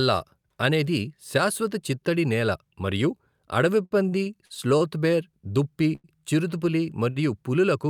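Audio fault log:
3.85–4.82 s, repeated stalls (stutter): after "చిత్తడి నేల మరియు అడవి", packets fell behind playback and the buffer emptied five times, each gap bridged by continuing the last sound (longest 55 ms, 167 ms total, about 17% of the span). The speech drags. Spectrograms show repeated frozen harmonic stretches, and waveforms show duplicated periods.
5.95 s and 7.10 s, short stall from a late packet: after "బేర్ దుప్పి" and again after "బేర్ దుప్పి చిరుతపులి", a late packet left the buffer empty, so the last sound was held for 86 ms and then 54 ms before resuming. Nothing is lost. Each shows as a smeared horizontal band and a run of repeated waveform cycles.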